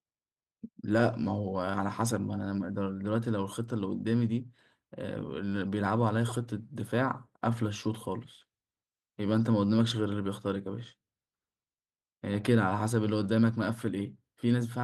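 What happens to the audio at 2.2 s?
Nothing goes wrong at 2.2 s: the speech carries on intact through that moment, with only the light, steady colouring of the Opus voice compression that runs through the clip.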